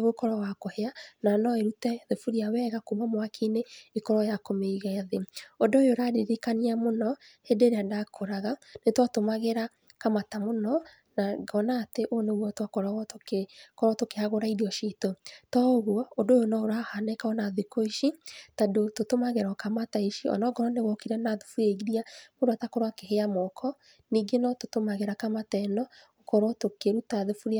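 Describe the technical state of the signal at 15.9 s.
At 15.9 s the speech signal is intact, with no dropout, distortion or other fault audible at that point.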